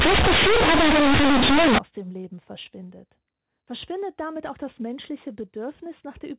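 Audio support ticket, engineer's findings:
0.00–1.78 s: loud buzzy distortion, hiss through pauses. Companded audio read as linear: A-law bytes played as raw 8-bit, never expanded. Waveform bent out of shape, quiet passages as large as loud, spectrogram smeared broadband.

From 1.78 s, G.711 telephone coding audible as a hard 4 kHz ceiling, consistent with 8 kHz A-law, faint level-tracking grain under the speech.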